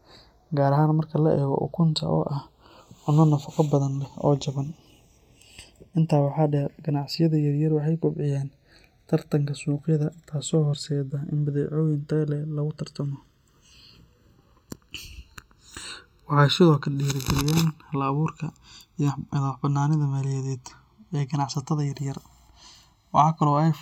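Throughout the speech, the channels are drifting apart. The two sides were captured on separate clocks, mismatched by roughly 40 parts per million. Their offset slowly grows to about a millisecond. In mono, comb notches sweep gradually, heard as slow flanging.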